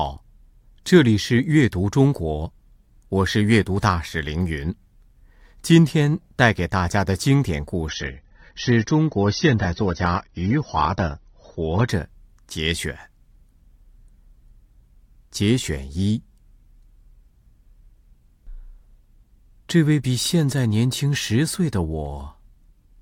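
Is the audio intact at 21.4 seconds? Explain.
Yes, the audio is intact at 21.4 seconds, with no dropout, click, distortion or other technical fault at that moment.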